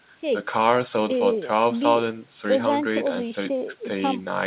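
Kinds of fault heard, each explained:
No kinds of fault are heard in this speech clip.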